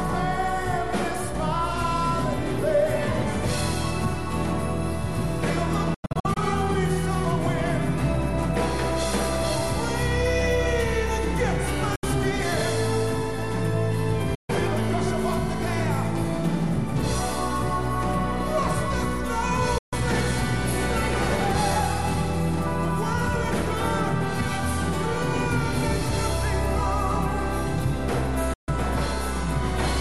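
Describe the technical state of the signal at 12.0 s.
At 12.0 s the signal falls silent in a short hole from 11.96 to 12.04 s. This is a Bluetooth dropout, likely caused by audio packets failing to reach the headphones in time. Late packets are discarded, so the output has nothing to play until good data arrives again. The length of the gap fits about three lost frames. When sound returns, it picks up further along, as if it had kept playing through the silence.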